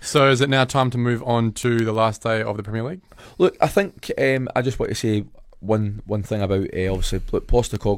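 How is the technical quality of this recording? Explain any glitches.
The recording has a clocking fault. Word clock ticks run from 0.18 s to 7.92 s, roughly every 0.15 s. The receiving device is not locked to the sender's clock. They drift apart at about 150 ppm, so samples slip regularly. Each slip gives a sharp tick.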